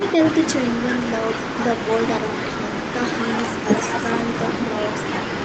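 No faults in this speech; the content stops at 8 kHz, as expected from normal call microphone processing and a WebRTC call path running a wideband codec.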